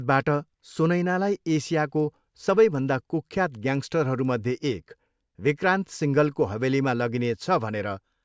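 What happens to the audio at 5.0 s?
At 5.0 s the speech carries a small tick from a resampler restarted on every block. The 24 kHz to 16 kHz conversion starts fresh each 250 ms, leaving an error at every block edge, so ticks recur at 4 Hz throughout the clip. Unlike dropout clicks, nothing goes missing, and the ticks are strictly regular and sound only while there is signal.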